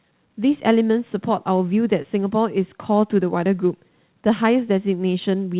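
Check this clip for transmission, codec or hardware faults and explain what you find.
One transmission fault is audible. At 2.02 to 2.06 s, short concealed packet loss: about 20 ms of speech arrived too late, so the receiver extended the preceding sound and blended back, leaving a brief smear or wobble. The band-limit at 4 kHz fits a G.711 A-law call path.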